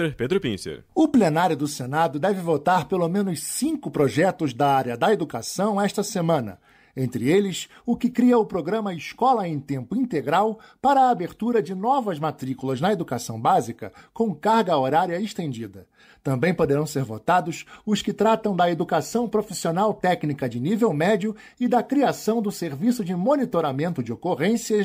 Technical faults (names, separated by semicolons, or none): none